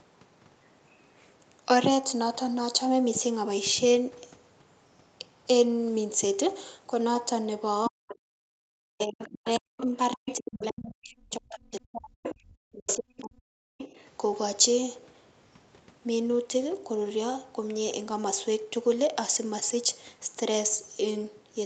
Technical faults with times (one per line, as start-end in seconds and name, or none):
7.84-8.15 other side's voice leaking through
7.88-8.15 speech suppressed in double talk
8.43-8.55 background gated by the echo canceller
8.83-13.90 speech suppressed in double talk
9.00-10.87 other side's voice leaking through
12.24-12.35 other side's voice leaking through
12.88-13.21 other side's voice leaking through
13.78-14.06 other side's voice leaking through